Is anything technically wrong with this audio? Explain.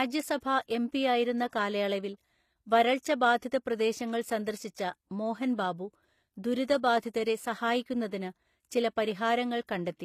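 Yes. Throughout, the speech likely went through HE-AAC compression at a bitrate that sounds like 24 kbps. Its treble is rebuilt from copied lower bands, so s sounds come out gritty and metallic.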